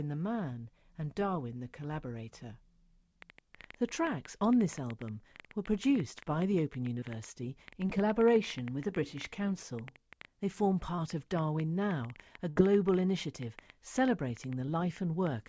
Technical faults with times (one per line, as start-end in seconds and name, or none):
3.22-15.49 train of clicks
7.00-7.04 short concealed packet loss
7.88-7.91 short concealed packet loss
8.81-8.85 short concealed packet loss
10.96-11.00 short concealed packet loss
12.50-12.58 burst of packet loss
14.66-14.69 short concealed packet loss